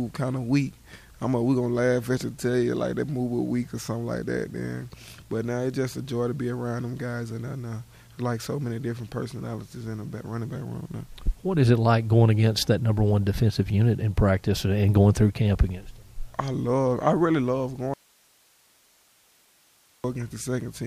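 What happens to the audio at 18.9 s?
An audio dropout to a faint residue runs from 17.94 to 20.04 s. The signal was likely lost upstream while the path after the break stayed live, so the sound cuts out abruptly, leaving only hiss roughly 35 dB down until it returns.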